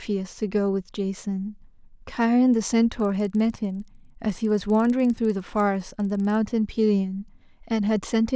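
Speech carries a steady 20 Hz ticking buzz from 3.0 to 6.4 s, present only under signal: a resampler restarted on every 50 ms block, which fits a 48 kHz to 16 kHz conversion, leaving an error at each block edge.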